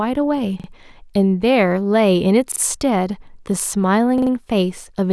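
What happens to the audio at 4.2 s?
A repeated buffer runs from 4.18 to 4.31 s. New audio failed to reach the playback device in time, so it replayed the last block it held. That block lasts about 43 ms, which fits a 1024-sample buffer, and it sounds three extra times, filling roughly 130 ms. The result is a quick stutter of the same sliver of speech, with a hard join at each repeat. Nothing seems to be skipped afterward; the speech resumes where it left off, only slightly delayed.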